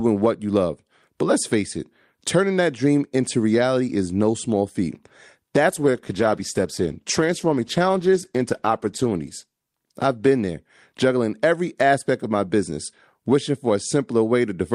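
At 5.68 s, just before "every aspect of my", a call bitrate drop begins: the bandwidth estimate fell and the Opus encoder was pushed far down, consistent with roughly 48 kbps falling to about 13 kbps. The speech turns coarse, watery and dulled, with treble lopped off, bottoming out for about 3.6 s before clearing at 11.11 s.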